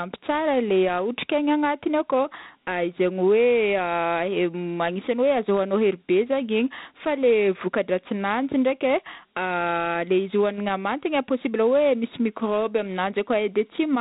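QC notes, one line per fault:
Throughout: Dialogic VOX ADPCM. The speech sits in a band that stops near 3.9 kHz, with a plainly audible gritty hiss riding along behind it. That fits 4-bit OKI-style ADPCM at roughly 32 kbps, where coarse step-size guesses leave quantisation grit trailing each sound.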